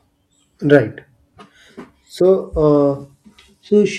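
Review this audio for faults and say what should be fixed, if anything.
At 2.37 s the speech takes a Bluetooth SBC bit pool drop that lasts to the end of the clip. The treble goes dull and a gritty, grainy noise settles over the sound. That's what happens when the phone starves the encoder on a busy link: the upper sub-bands lose their bits and the rest get quantised coarsely. The drop in quality fits the bit pool falling from about 28 to 13, near 102 kbps. To prevent it, cut radio congestion or pin the link to a higher fixed bit pool.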